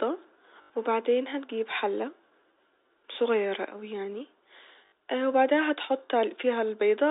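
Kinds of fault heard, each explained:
Packet loss with last packet repeated: at 0.62 to 0.70 s, just before "وبعدين هتجيب حلة", and again at 4.86 to 4.92 s, the sound stalls into a brief robotic stutter lasting 80 ms and then 60 ms. Lost packets were filled by replaying the last good one. The repeats buzz at about 50 Hz, which fits 20 ms packets, over the narrow telephone band of the G.711 line.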